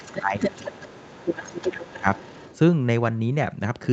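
From the start to 0.22 s, and again from 0.39 s to 2.58 s, a second voice runs underneath the speech at roughly 10 dB below it. This is the other side's voice leaking through, likely because the echo canceller left part of the loudspeaker signal in the microphone. On a spectrogram it shows as a fainter, separate harmonic pattern layered over the main talker.

Overlapping this, from 0.00 s to 2.05 s, the talker's own speech is suppressed in double talk for about one and a half seconds in total. The level dips by as much as around 20 dB, so words sound ducked, dulled or chopped. This is likely because the canceller could not separate the near talker from the echo and attenuated both. On the waveform the envelope sags in uneven pieces, and the spectrogram shows the upper harmonics thinning or dropping out in patches.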